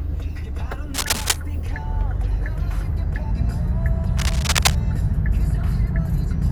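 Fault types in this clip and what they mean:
Cable scratch noise: from 0.94 to 1.36 s and again from 4.18 to 4.75 s, dense, irregular bursts of crackling and rustling noise sit on top of the sound, roughly as loud as the sound itself. The likely cause is a worn cable, connector or control being moved, so that its contact resistance flickers rapidly and injects that uneven noise into the signal for the half-second or so that the movement lasts.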